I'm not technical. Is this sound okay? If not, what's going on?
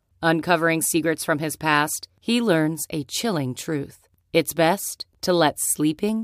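Yes, this speech recording sounds fine. There is nothing technically wrong to hear in it.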